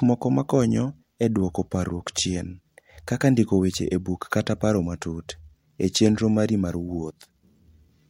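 No technical faults turn up anywhere in this recording; nothing breaks in, drops out or stumbles at any point.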